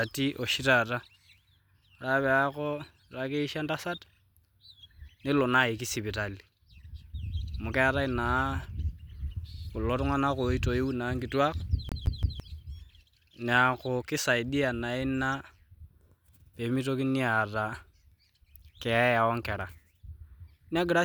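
Speech, with one clear fault: from about 11.89 s to 12.40 s the audio gets stuck on one turn like a skipping CD, with the same chunk of roughly 0.17 s played three times, a tiny mute at each jump back. That loop length is what you'd get from a scratch kicking the laser back a track at the same spot every rotation, so you hear that quick, even stutter instead of the sound moving on.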